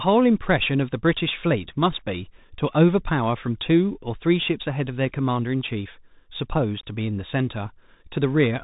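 From start to finish the speech carries the sound of a Bluetooth CVSD headset codec, with plainly audible damage. Nothing above about 3.8 kHz survives, which gives the narrowband telephone character. CVSD encodes each sample as a single up-or-down bit, consistent with a 64 kbps stream, adapting its step size as it goes. Fast, loud high-frequency movement outruns that step, so sibilants turn scratchy and distorted, and a granular hiss sits beneath the speech.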